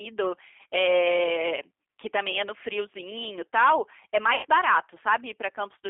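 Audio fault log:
Throughout: G.729 codec. Sound is confined to about 250 Hz to 3.5 kHz and is plainly rough and synthetic, which fits an 8 kbit/s pulse-coded speech codec.
4.35 to 4.46 s: VoIP packet loss concealed by the speech codec. About 80 ms went missing. The decoder stretched its last frame into a fading buzzy tone or coloured noise, and the sound stays weak briefly afterward.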